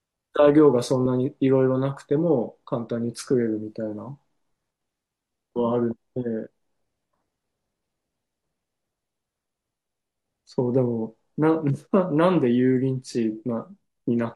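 No technical faults occur at any point in this speech recording.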